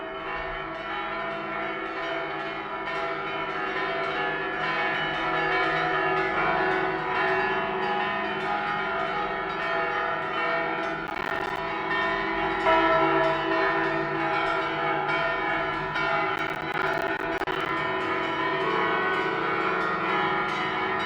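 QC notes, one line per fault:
11.07–11.58 s, processor overload crackle: a burst of gritty tearing, many buffers of roughly 10 ms each dropped to silence as the processor missed deadlines in a row.
16.36–17.69 s, processor overload crackle: a longer rough crackle, with dozens of missed roughly 10 ms buffers leaving hard-edged silent gaps until the load eased.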